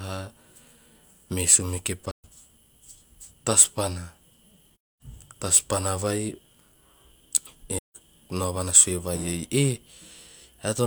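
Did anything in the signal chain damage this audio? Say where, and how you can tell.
Yes. AAC frame loss with muting in the codec: zeroed frames leave soft-faded silent gaps at 2.11–2.25 s, 4.76–5.02 s and 7.76–7.96 s, each faded over one frame.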